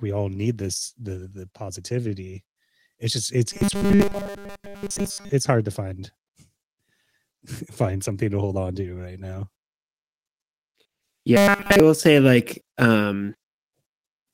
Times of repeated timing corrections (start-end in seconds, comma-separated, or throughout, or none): 0.62-13.71